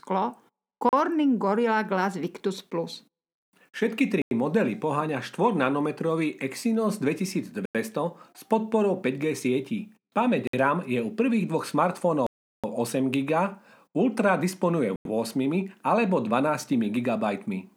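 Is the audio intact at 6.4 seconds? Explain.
Yes, the audio is intact at 6.4 seconds: the speech there plays through cleanly, with no dropout, click, distortion or other fault at that moment.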